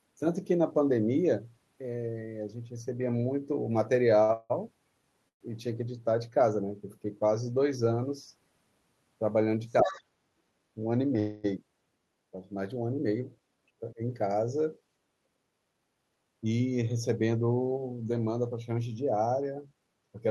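From 4.23 to 5.42 s the sound stalls three times, the longest hold about 168 ms, with about 344 ms of continued, fading sound in all and nothing lost. These are repeated stalls (stutter): packets kept arriving late, so the jitter buffer emptied again and again. Unlike a single freeze, the dragging recurs across the span, about 29% of it concealed.

At 9.82 s the speech dips by about 15 dB for roughly 150 ms, and from 9.86 to 10.03 s a second voice sits about 10 dB below it. The dip is likely speech suppressed in double talk: the echo canceller, unable to separate talker from loudspeaker echo, turned the talker down. Unlike dropouts from packet loss, the dip coincides with the other voice.

That second voice is the other side's voice leaking through, likely residual loudspeaker echo the canceller failed to remove. It is distinct from crosstalk because it arrives together with the suppression dip, quieter rather than a clean parallel conversation.

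From 11.19 to 11.46 s the sound hangs as a continued, fading tone for about 247 ms, never reaching silence, then resumes from where it stopped, nothing skipped. This call audio freeze is likely a single held-up burst of packets, adding 247 ms of delay, not a recurring stutter.

At 13.81 s the speech dips again by about 15 dB, this time for about 100 ms, the same double-talk suppression pattern.

From 14.80 to 16.61 s the speech runs at 109% speed, and from 19.39 to 20.29 s at 112%, removing about 200 ms and then 100 ms. This is jitter buffer speed-up, trimming pitch periods to shed excess delay. Pitch stays put, so it sounds hurried, not chipmunk-like as resampling would.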